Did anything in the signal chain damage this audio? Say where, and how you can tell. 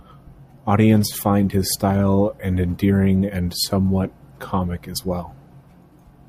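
No, nothing audible in this speech points to damage at any stage of the chain.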